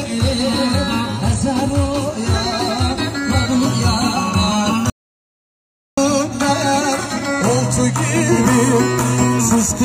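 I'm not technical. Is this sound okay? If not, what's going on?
No. The input was likely cut off briefly, an audio dropout to silence: from 4.9 to 5.97 s the sound stops dead, leaving about a second of total silence.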